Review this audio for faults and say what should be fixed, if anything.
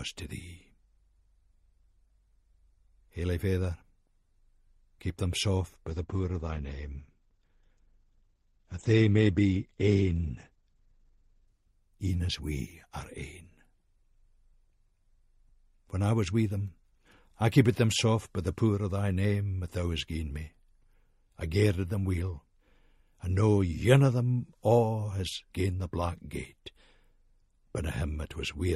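From 5.9 s to 14.05 s there is a call bitrate drop. The call's bandwidth estimate fell, so the encoder was forced to spend far fewer bits. For about 5.6 s the top end is cut off near 8 kHz instead of reaching 20 kHz, and the sound turns coarse and watery. The texture fits a fall from around 96 kbps to roughly 13 kbps. Unlike packet loss, nothing drops out or stutters. Unlike a plain low-pass filter, the dullness comes with grainy coding artefacts, and both ease together as the bitrate recovers. To fix it, stabilise the network path, or raise the minimum bitrate floor in the congestion control so the encoder never falls this low.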